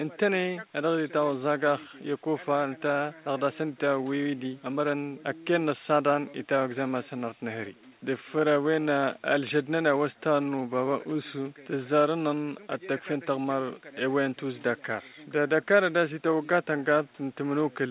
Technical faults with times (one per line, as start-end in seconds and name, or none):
none